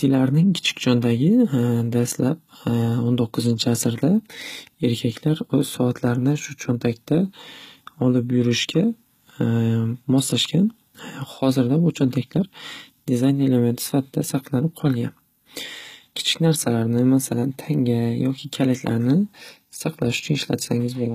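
Right through the speech there's plainly audible HE-AAC compression damage, likely from a low-bitrate stream around 20 kbps: s sounds go gritty and lispy, nothing above 14.9 kHz.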